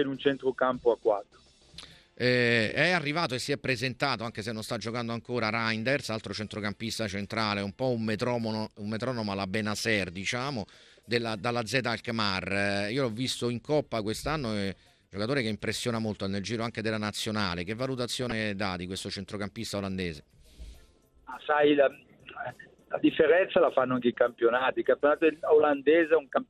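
MP2 compression runs through the whole audio, most likely from low-bitrate MPEG Layer II coding: starved upper sub-bands drop out and flicker, leaving a dull, gurgling, granular sound that fits roughly 80 kbps. DAB burbling hits at 15.53–15.70 s and 18.22–18.32 s, where uncorrected bit errors throw single sub-bands off level across a few frames, making brief bursts of burbling.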